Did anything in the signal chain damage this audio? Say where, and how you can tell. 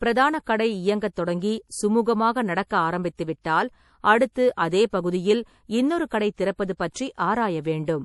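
Yes, at the codec stage, throughout. Nothing comes through above 11.5 kHz, and the speech has a plainly audible watery, swirly texture. That points to likely MP3 compression at a low bitrate, something like 48 kbps, with the treble cut and weak lines flickering between frames.

There's also pre-echo from the same codec, from 2.67 to 2.71 s. A short hiss of about 37 ms leads into a sharp attack, which sounds soft. The block's quantisation noise, sized for the loud onset, has spread back into the quiet gap ahead of it.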